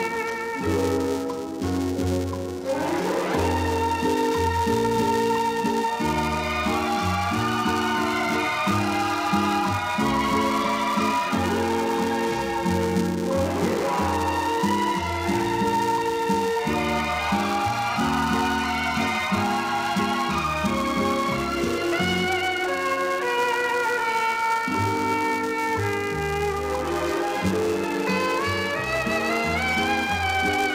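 A steady buzz at 375 Hz runs under the audio from start to finish, rising and falling with its level. This is the filter restarted on every block: the filter loses its state at each boundary, consistent with a 128-sample block, and begins each one from silence. A waveform shows small transients every 2.7 ms. A spectrogram shows evenly spaced harmonic lines at multiples of 375 Hz.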